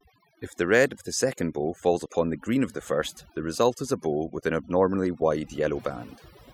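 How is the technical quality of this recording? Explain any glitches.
The recording suffers from overdone noise removal across the whole clip. An aggressive denoiser gated bands near its noise estimate, leaving twinkling specks; the spectrogram shows holes and scattered isolated dots.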